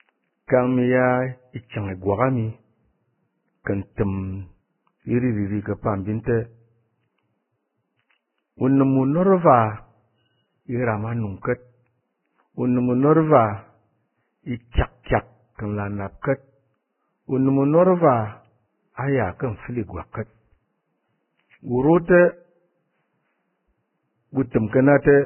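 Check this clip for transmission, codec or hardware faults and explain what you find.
The speech carries one codec fault, present for the whole clip.

Vorbis compression, throughout: the damage most likely comes from low-bitrate Vorbis coding. Nothing survives above 3 kHz. The quantised treble residue has turned into hiss-like grain, so tones sound rough and attacks smeared. The heavy damage points to a bitrate near 9 kbps.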